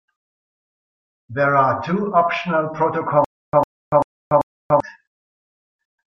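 From 3.25 s to 4.80 s, the speech breaks into a stutter with silent gaps. The same 102 ms burst plays four times, each followed by about 287 ms of digital silence, a steady 390 ms cycle. This likely comes from a stalled player replaying its last buffer. The gaps separate it from a seamless loop, and the repeated burst separates it from a plain dropout.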